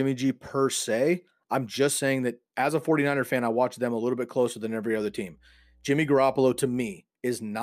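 Mains hum enters at 4.97 s, just after "bit closer than every", and lasts until 6.95 s: a steady 60 Hz tone from the power line leaking into the signal path through a ground loop or nearby transformer, sitting low, well beneath the speech.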